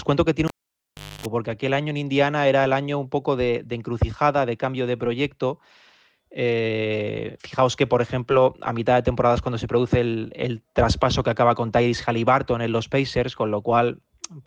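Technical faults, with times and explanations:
0.48 to 1.26 s, cable pulled and plugged in: a pop as the live lead comes out, then near silence, with the lead out for about 0.73 s in all, ending in roughly 0.26 s of 50 Hz mains buzz while only the plug tip makes contact and picks up hum, and a second pop as the signal returns. The paired pops and the hum just before reconnection set it apart from a simple digital dropout, which cuts to clean silence with no buzz.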